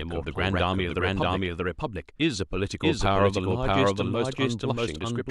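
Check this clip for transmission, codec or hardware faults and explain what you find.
One fault runs through the whole speech clip: a doubled audio track. A full-band copy trails around 0.7 s behind at roughly equal level, likely from a second, slower capture path. It sounds like a dry, roomless repeat, and on the spectrogram and waveform the speech pattern appears twice, offset in time.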